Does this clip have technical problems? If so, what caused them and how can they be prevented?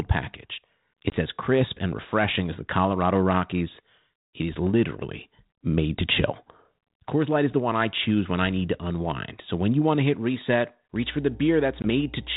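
Yes. Packet loss on an ADPCM call occurs twice, at 1.10 s and at 11.82 s. Each time about 20 ms of audio, roughly one packet's worth, drops to silence. Because ADPCM codes only differences from a running prediction, the receiving decoder's predictor and step size lose track of the sender's, so the sound returns slightly distorted before resynchronising. On a waveform each event shows as a flat, hard-edged gap. On a spectrogram it is a thin vertical blank strip. Prevent it with a jitter buffer, packet-loss concealment and decoder state reset on loss.

Mains hum starts at 10.94 s and runs to the end. It is a steady 60 Hz tone about 20 dB below the speech, with some low harmonics. It comes from the power line coupling into the signal, most likely through a ground loop or a nearby transformer. On a spectrogram it appears as a bright horizontal line at 60 Hz, with weaker lines at its multiples, persisting through pauses. 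On a waveform the quiet stretches carry a regular low-frequency ripple instead of a flat baseline. Prevent it with balanced cabling, a single ground point or a ground-loop isolator, and by keeping transformers away from the audio path.

The G.726 coding at 32 kbit/s underneath is audible as light coding damage and the usual band limit below 4 kHz.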